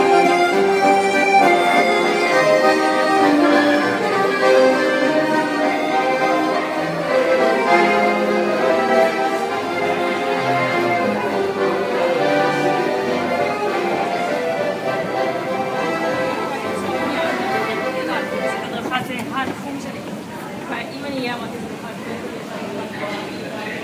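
No audible technical faults.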